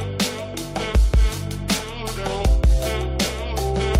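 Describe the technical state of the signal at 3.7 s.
Nothing goes wrong at 3.7 s; the signal is intact at that point, with no dropout, distortion or other fault audible.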